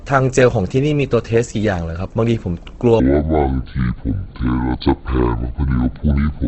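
Throughout, the speech is grainy and rough, with nothing above 8 kHz. The likely cause is Opus compression in its CELT music mode, where a starved bit budget fills bands with folded or noisy content. The damage is plainly audible and fits a rate near 16 kbps.

From 3.00 s to the end, the section plays at the wrong speed, at 0.568 times the original rate. Speed and pitch fall together, so the speech drags and drops roughly ten semitones, likely from playback against a mismatched clock.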